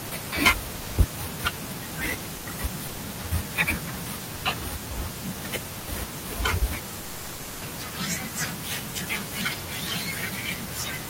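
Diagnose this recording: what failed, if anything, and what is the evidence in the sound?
Seven times the speech gives way to steady noise or near silence and then resumes: 0.07–0.11 s, 0.75–0.97 s, 2.35–2.45 s, 2.87–2.99 s, 4.35–4.43 s, 5.79–5.87 s, and a long 6.99–7.61 s gap of 620 ms. The likely cause is sound dropped by the voice detector at the codec stage. The Opus DTX detector judged these stretches to be background and stopped sending, and the receiver filled the gaps with comfort noise until the detector triggered again.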